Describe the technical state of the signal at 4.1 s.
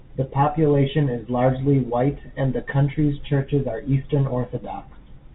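At 4.1 s the audio is intact, with nothing wrong beyond the ordinary character of the call path, whose G.711 mu-law coding leaves nothing above 4 kHz.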